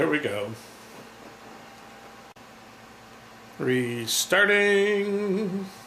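Nothing stood out as a fault when listening through the recording.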